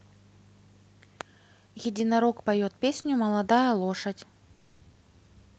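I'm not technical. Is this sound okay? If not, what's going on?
No, there are two hiccups, both typical of audio sent over an internet call.

At 3.01 to 3.05 s there is a short stall from a late packet. One small piece of the audio reached the listener's end late, so the receiving program held the last sound for about 20 ms while it waited. You hear a brief stretched or slightly buzzy moment, not a gap. Nothing is lost; the audio just runs a fraction later afterwards.

At 4.56 to 4.89 s comes a call audio freeze, the same kind of waiting but much longer. The receiver kept the last sound going for about a quarter of a second, which sounds like a buzz or hiss trailing off rather than true silence. The likely cause is a burst of network delay. Unlike a dropout, no speech is skipped; it resumes where it stopped, just later.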